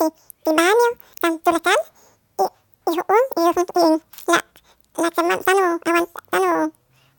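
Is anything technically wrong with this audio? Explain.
Yes, the whole clip has the audio read two samples at a time, so it plays at double speed. Somewhere in the chain the reader treated each pair of samples as a single frame, as if the data had two channels or samples twice as wide. The speech runs twice as fast and sits a full octave, 12 semitones, too high.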